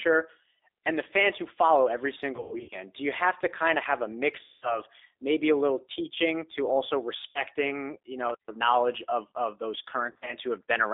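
Speech heard through a G.729 codec from start to finish, which fits an 8 kbit/s G.729A call. The coder rebuilds each 10 ms frame from a vocal tract filter, a pitch predictor and a few pulses, so the speech sounds rough and synthetic, with plainly audible codec damage. The line band runs from 300 Hz to 3.7 kHz. On a spectrogram everything sits inside that strip, with a clean empty band above 3.7 kHz and almost nothing below 300 Hz. VoIP packet loss concealed by the speech codec breaks the sound four times: 2.36 to 2.77 s (240 ms lost, scattered over 360 ms, longest gap 120 ms), 4.44 to 4.80 s (180 ms), 7.29 to 7.43 s (60 ms), and 10.12 to 10.34 s (100 ms scattered over 160 ms, longest 40 ms). In each gap the decoder stretches its last pitch and filter into a buzzy tone or a coloured noise that fades. The waveform shows a shrinking, repetitive envelope, and the spectrogram shows flat, smeared stripes. 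The gap lengths are consistent with losses in 20 ms packets.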